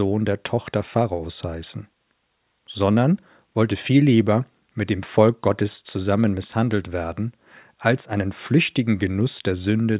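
No technical faults turn up anywhere in the speech. There is no moment in the recording that needs a timestamp or a note of its own.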